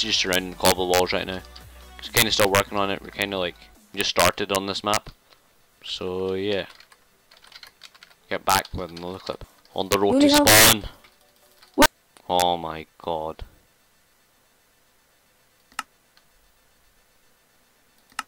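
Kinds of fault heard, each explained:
Integer overflow: the signal is driven about 13 dB past the integer limit, so the few peaks that exceed it wrap to the opposite extreme instead of being held, giving harsh cracks on loud moments throughout. The waveform shows sudden jumps from one extreme to the other; the spectrogram shows broadband vertical streaks.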